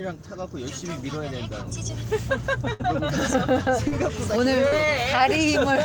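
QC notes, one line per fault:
2.73 to 2.88 s, burst of packet loss: about 60 ms of sound never arrived, so the receiver stretched the preceding sound into a fading buzz or hiss lasting about 59 ms. Playback then resumes further on with that stretch missing. This is a longer gap, unlike the brief smears later.
3.88 to 3.94 s and 4.68 to 4.74 s, short concealed packet loss: about 40 ms went missing each time. The receiver continued the last sound for that span and blended back into the real audio, leaving a brief smear or wobble rather than a held, fading tail.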